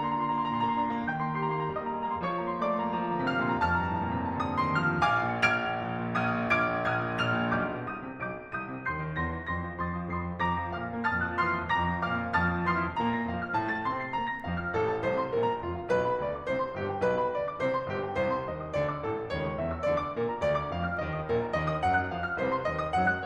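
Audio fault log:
No faults are heard in this music clip. Nothing in the audio calls for a log entry.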